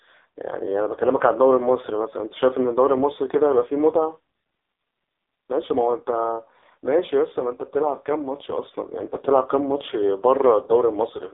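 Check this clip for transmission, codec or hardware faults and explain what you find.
The speech has one fault, the AMR narrowband mobile codec, and it runs throughout. Nothing above about 3.8 kHz survives, and the band sits near 300 Hz to 3.7 kHz. The voice is rebuilt from a vocal-tract model and sparse pulses. The damage is heavy and buzzy, which fits the codec's lowest 4.75 kbps mode.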